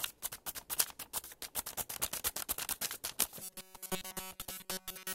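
From 3.41 s to the end of the clip, the audio turns into a rigid, metallic buzz at about 188 Hz that only roughly follows the original sound. This is robotic sound from repeated short buffers. The likely cause is audio arriving too seldom, so the playback path fills the gaps by looping a segment of roughly 5.3 ms. Around 70 percent of this stretch is repeated material, so the real audio in between is skipped.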